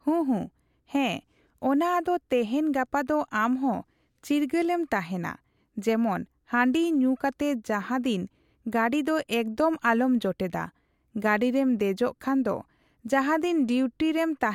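No technical faults are audible.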